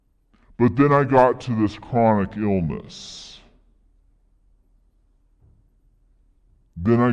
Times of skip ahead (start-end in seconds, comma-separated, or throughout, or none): none